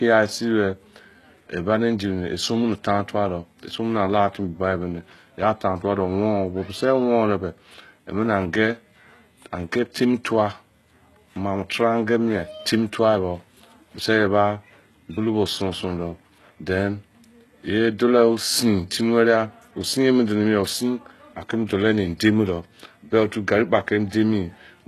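A speech clip with plainly audible HE-AAC compression throughout. Nothing remains above 12.3 kHz. The treble sounds synthetic and s sounds turn gritty, likely from copied-up bands at roughly 16 kbps.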